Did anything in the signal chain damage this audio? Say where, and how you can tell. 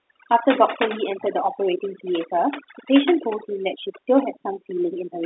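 Yes: overdone noise removal in call processing, throughout. Over-suppressed bands leave near-silent background with twinkling specks and isolated flickering spectrogram dots.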